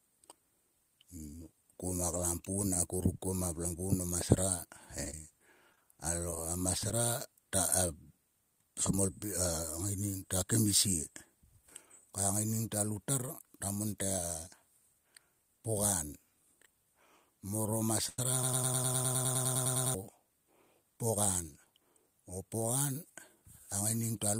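From 2.62 to 3.34 s the speech stutters with repeated stalls: packets arrived late four times, and the receiver stretched the last sound across about 44 ms in total, no hole longer than 12 ms, then trimmed 11 ms to catch up. On a spectrogram, harmonics smear sideways in brief flat patches.

Between 5.05 and 6.91 s come scattered short gaps, roughly seven, where about 80 ms of packets went missing. Each hole, none much beyond 20 ms, was patched by continuing the previous sound, giving small ticks and smears. The waveform shows short, slightly out-of-place segments with abrupt joins.

At 18.09 to 18.19 s there is a short stall from a late packet. The jitter buffer ran dry, so the receiver held the last sound for 90 ms until the packet turned up, adding 90 ms of delay. It is heard as a held sound with a slight buzz or dip, seen as a flat, frozen spectral band.

From 18.43 to 19.94 s a broken-record loop repeats one 102 ms fragment 15 times back to back, most likely because the player or stream stalled and kept resending what it held. 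The original audio for that stretch is lost. The waveform shows an identical block tiling exactly, with vertical seams in the spectrogram.

From 21.43 to 21.81 s a jitter buffer speed-up plays the speech at about 109% speed with unchanged pitch, cutting roughly 40 ms of surplus buffered audio in small pitch-period slices. It sounds briefly hurried. Harmonic lines stay level while the syllables appear compressed in time.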